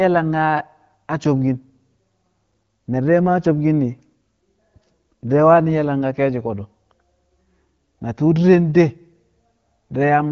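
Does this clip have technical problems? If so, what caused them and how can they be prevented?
No, there are no technical problems to report here.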